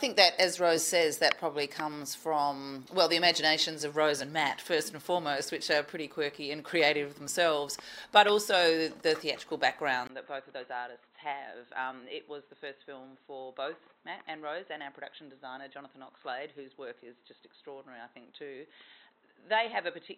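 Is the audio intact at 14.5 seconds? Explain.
No. From 10.07 s to the end, the input was likely switched to a poorer device. After a brief 20 ms gap, the sound turns dull and boxy with nothing above 4 kHz, drops noticeably in level, and carries a new, faint background noise.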